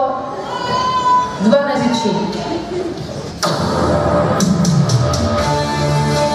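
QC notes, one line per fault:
1.74–1.79 s and 3.28–3.32 s, compressed frames skipped: the audio jumps ahead by roughly 150 ms, then roughly 100 ms, which fits losing about three and then two 46.4 ms frames.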